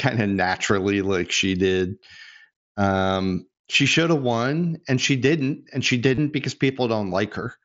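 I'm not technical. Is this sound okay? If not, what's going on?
No. From 6.15 to 6.18 s the speech turns into a brief buzzy tone, then warbles as it resumes. This is concealed Bluetooth headset packet loss: the headset dropped a short run of packets, and the phone filled the gap by repeating recent sound.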